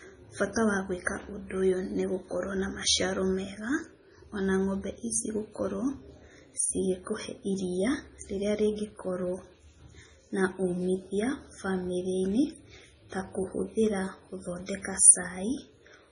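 Speech running the whole way through carries heavy MP3 compression artefacts, likely from a starved encoder: nothing above 10.6 kHz, and weak detail flickers in and out, giving a watery, swirling texture with chirpy s sounds, fitting roughly 24 kbps. Simple low-pass filtering would dull the sound without that swirl.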